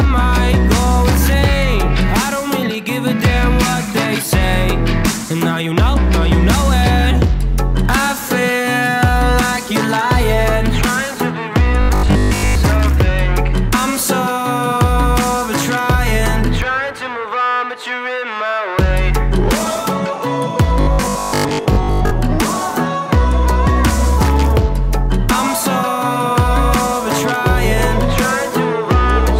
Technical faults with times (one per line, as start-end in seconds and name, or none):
11.81-12.55 robotic sound from repeated short buffers
20.81-22.13 robotic sound from repeated short buffers